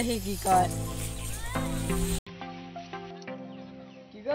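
Input switched to a poorer device at 2.19 s, running to the end: after an 80 ms gap the sound turns dull, with nothing above 5.9 kHz, drops roughly 10 dB, and gains new background noise around 30 dB down, likely from a narrower-band microphone.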